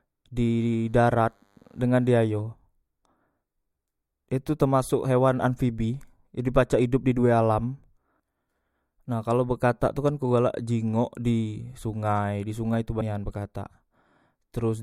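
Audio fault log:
0.41–2.41 s, DECT cordless phone buzz: A faint, thin buzz sits well below the speech for two seconds. A nearby cordless handset or base fires radio bursts every 10 ms, and the audio circuitry rectifies them into a 100 Hz pulse train rich in harmonics. On a spectrogram it shows as a stack of evenly spaced horizontal lines at 100 Hz and its multiples, starting and stopping abruptly. The waveform shows a small periodic ripple.
13.00 s, compressed frames skipped: The speech jumps forward, losing roughly a fifth of a second in a single instant. The skip fits several whole codec frames of about 26 ms each going unplayed, either missing or rejected as damaged. On a spectrogram the speech contours break off and resume mid-pattern. The waveform shows a discontinuity in the envelope.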